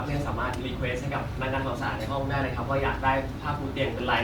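Speech with generation loss throughout: swirly, hollow and smeared, with blurred attacks, likely from about five re-encodes consistent with 64 kbit/s Opus. The spectrogram is empty above 20.1 kHz.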